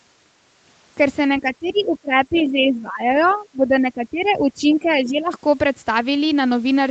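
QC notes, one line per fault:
1.41–5.33 s, speech suppressed in double talk: the talker's level sags repeatedly over roughly four seconds, at worst by about 15 dB, with dulled and broken stretches. This is likely an echo canceller that, with both sides talking, could not tell near speech from loudspeaker echo and attenuated both.
1.66–1.81 s, 2.35–2.44 s, 3.21–3.34 s, 4.70–5.06 s, other side's voice leaking through: faint fragments of a second voice sit under the talker, some 20 to 35 dB down, loudest near 2.4 s. This is likely far-end loudspeaker sound that echo cancellation left in the microphone signal.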